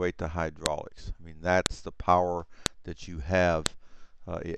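Sharp clicks land at 0.66, 1.66, 2.66 and 3.66 s, one per second: file header played as audio, where joined pieces kept their headers and those bytes snap out as samples.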